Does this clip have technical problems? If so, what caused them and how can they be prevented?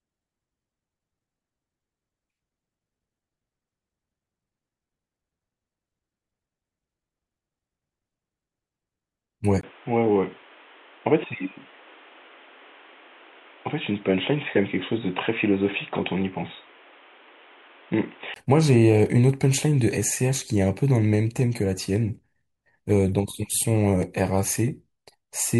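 Yes. From 9.61 s to 18.36 s the speech goes dull and boxy, with nothing above about 3.8 kHz, and there's a brief gap of about 20 ms where it changes. The loudness barely moves, but new background noise comes in roughly 30 dB under the voice. That points to an input switched to a poorer device, likely a headset dropping into its call profile, before things snap back. Lock the input device and disable automatic switching before recording.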